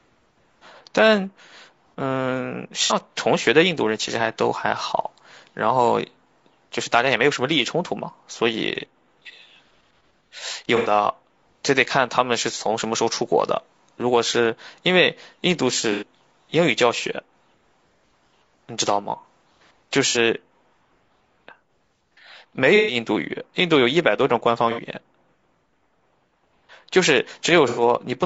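Throughout the speech, a likely low-delay AAC compression (AAC-ELD) stage at a low bitrate, which fits roughly 32 kbps, uses short frames that resolve pitch harmonics poorly, so the voice sounds rough and grainy, with noise filling the gaps between harmonics and a thin, synthetic-sounding top band.

AAC frame loss with concealment then occurs seven times, at 2.84 to 2.93 s, 10.76 to 10.91 s, 15.92 to 16.03 s, 20.09 to 20.18 s, 22.76 to 22.96 s, 24.71 to 24.80 s and 27.68 to 27.82 s. Each time, the decoder lost between 60 and 120 ms of audio and patched the gap from the last good spectrum, leaving brief smeared, noisy, phasey blurs in the speech, longest at 22.76 s.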